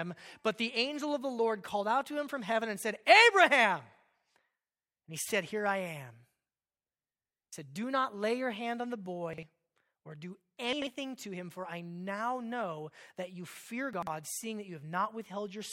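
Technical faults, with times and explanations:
9.33–9.43 s, 10.73–10.87 s and 13.93–14.07 s, chunks out of order: after "your hand on the", between "or do" and "to him for I", and between "know that you fear" and "seeing that you", a 46.44 ms block plays one or two blocks late, behind audio that should follow it. Nothing is missing or repeated, unlike a dropout or stutter, so the sound comes out briefly scrambled, with three hard joins at each swap.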